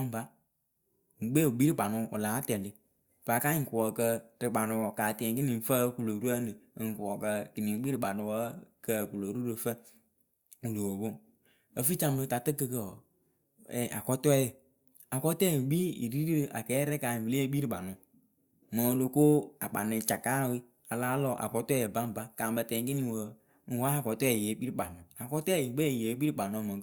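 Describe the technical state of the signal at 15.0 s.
At 15.0 s the speech signal is intact, with no audible fault at that point.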